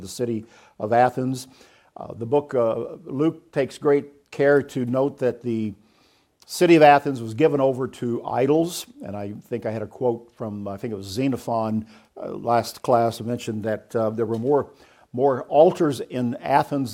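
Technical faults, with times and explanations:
Nothing stood out as a technical problem on listening.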